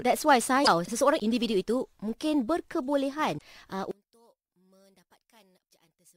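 Damaged data in a compressed stream strikes twice, from 0.61 to 0.68 s and from 3.35 to 3.42 s. In each spot the decoder meets bytes it cannot read as valid frames, loses its place, and has to hunt for the next frame header before it can resume. Each stretch is heard as a short squawk or blip that breaks into the speech.

From 3.91 s to the end, the speech collapses by about 33 dB. This is likely one channel inverted: one side of the stereo pair has flipped polarity, so when the two channels are summed to mono, the centred speech cancels against itself. Only the difference between the channels survives, which leaves the voice nearly vanished for the rest of the clip.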